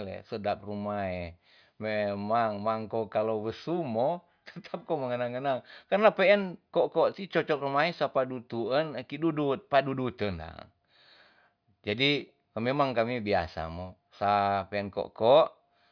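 Nothing stood out on listening to this speech recording.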